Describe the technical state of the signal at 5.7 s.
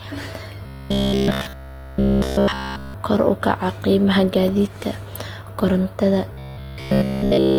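At 5.7 s the speech carries a transcoding artefact that runs through the whole clip. The sound points to an HE-AAC stream at around 40 kbit/s re-encoded as Opus at around 24 kbit/s, likely transcoding between lossy codecs. The second encoder spends bits on the first one's artefacts, so both sets of artefacts are heard together. The lowest cut-off in the chain stays.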